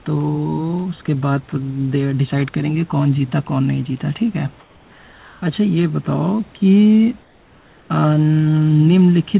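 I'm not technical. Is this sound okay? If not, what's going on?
No. There are two kinds of fault, both short.

The first is sound dropped by the voice detector. At 0.04 to 0.06 seconds and again at 1.06 to 1.08 seconds, a tiny slice of speech vanishes. Steady noise or near silence fills each gap instead. Each gap lasts about a fiftieth of a second. The likely cause is the sending side's speech detector. It briefly mistook part of the sound for background and stopped sending. The receiver then filled the hole with artificial noise.

The second is comfort noise in place of the background. From 4.6 to 5.42 seconds, and from 7.22 to 7.9 seconds, there are pauses with no speech. In those pauses the real room sound disappears. A flat, even hiss replaces it, slightly quieter than the real background. This likely happens because the sender goes silent when nobody speaks. The receiver then plays made-up noise so the line doesn't seem dead. 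The speech runs through a phone-style call codec, which keeps nothing above 4 kHz.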